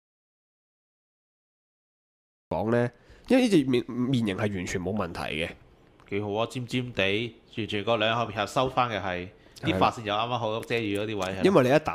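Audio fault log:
0.00–2.51 s, audio dropout to silence. The clip opens in dead digital silence, with no room tone or noise floor at all. The sound then enters abruptly at 2.51 s, already in mid-flow rather than building up from a natural start. The likely cause is an input that was lost before the clip began, such as an unplugged device, a dropped link or a mute left on, while the recorder kept writing silence. Whatever happened during those first two and a half seconds is gone.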